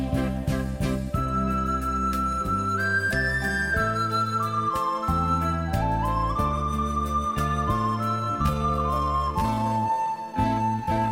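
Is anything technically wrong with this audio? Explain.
Yes. From 8.12 s to the end, a time-stretched section slows the sound to 0.668 speed with pitch unchanged. It drags, likely from stretching software repeating short pieces. A spectrogram shows horizontally elongated harmonics.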